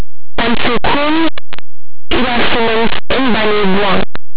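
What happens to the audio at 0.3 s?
At 0.3 s, as throughout, linear 8-bit audio read as mu-law turns speech samples just on one side of zero into the largest outputs while those on the other side stay small, giving harsh distortion: a clipped-looking waveform and broadband smear across the spectrogram.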